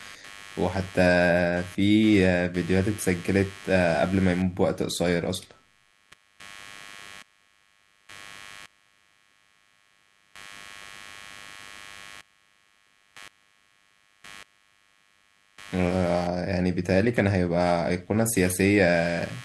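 Computer activity noise runs through the whole recording. It is a buzzing layer of rapid pulses, around a hundred per second, sitting roughly 25 dB below the speech. It does not follow the talking. It rises and falls with whatever the computer is doing. Changing load on the processor, graphics card or mouse shifts the ground that the audio circuit shares. That ground movement leaks into the signal as this chattering buzz.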